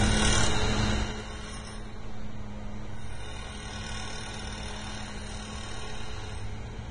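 A recording of everyday sounds, heavily band-limited and grainy throughout. Nothing is present above 9.7 kHz, and the remaining treble is rough and hissy, with transients smeared and tonal parts coarsened. This is likely Vorbis compression at a low quality setting, consistent with a bitrate around 24 kbps. The encoder has lowered its cut-off and quantised the upper residue so crudely that fine detail has turned into noise of similar energy. From 0.90 to 1.28 s there is zipper noise. The level drops by about 15 dB in 3 dB steps at roughly ten per second instead of gliding. Each abrupt gain jump leaves a small click, so a ticking texture rides on the sound for the duration of that fade.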